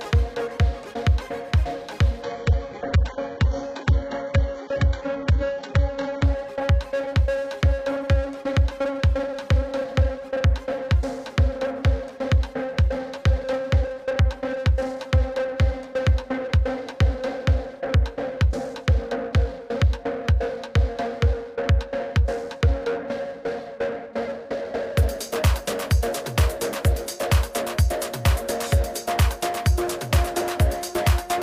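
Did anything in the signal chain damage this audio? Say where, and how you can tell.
Yes. The network stage forced the adaptive stream to a lower bitrate from 2.23 to 6.23 s. The player switched, without any gap, to a much more aggressively coded version of the sound for about four seconds. Over that stretch nothing remains above 8 kHz, and the top end turns thin and synthetic, which points to a very low bitrate spectral-replication codec standing in for the full-band stream. Quality jumps back just as abruptly at 6.23 s.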